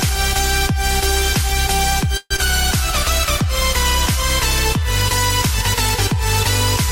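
From 2.17 to 2.40 s, likely a long network dropout, sound smears into a fading buzz, then 40 ms silence: blurred spectrogram bands, then a gap.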